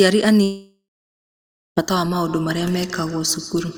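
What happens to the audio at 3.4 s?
At 3.4 s the speech is caught in feedback echo between two devices, which runs from 2.12 s to the end. A second device in the room replays this microphone's signal, the microphone hears it again, and neither echo canceller removes the other's playback. Each syllable returns roughly every 150 ms, thin and ringing, at about 19 dB below the speech. A spectrogram shows faint, evenly spaced copies of each syllable trailing it; the waveform shows small repeated bursts between the main ones.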